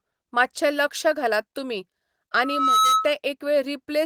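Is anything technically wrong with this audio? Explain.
Yes. From 2.34 to 3.14 s there is loudspeaker feedback squeal. A steady 1.3 kHz tone swells over a few tenths of a second and ends up about 5 dB above the speech. A microphone is picking up its own loudspeaker. At that frequency the loop gain exceeds one, so the tone grows by itself.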